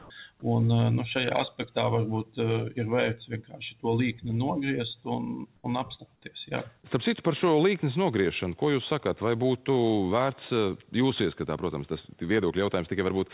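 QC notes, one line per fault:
0.0–0.1 s and 5.56–5.64 s, comfort noise in place of the background: the real background becomes steady, featureless hiss, about 5 dB louder first, then about 1 dB quieter, likely discontinuous transmission.
0.40–0.42 s, sound dropped by the voice detector: about 10 ms of actual sound, not just background, gives way to flat noise, likely a detector misreading it as silence.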